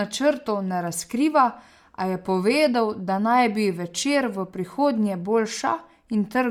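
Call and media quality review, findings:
Speech, whole clip, 0 s to end: breathy, grainy texture on the upper band, plainly audible; content extends to about 20.2 kHz. Likely Bluetooth LC3 compression: sparse high-band coding noise-filled per frame, consistent with roughly 48 kbps, 10 ms frames.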